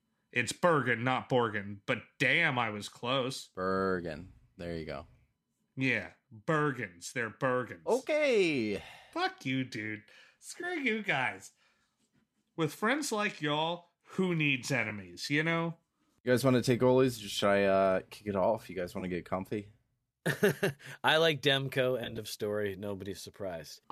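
At 10.61 to 10.64 s, again at 14.90 s and at 19.00 to 19.03 s there's AAC frame loss with concealment: about 20, 10 and 20 ms of audio go missing. The decoder patches each gap from the last good spectrum, so you get a short smeared, noisy blip. At 22.04 to 22.18 s it's worse, with about 70 ms lost across 140 ms in runs of up to around 20 ms, giving a choppy, phasey stretch. The 10 ms granularity fits short frames, likely from the low-delay AAC in the chain.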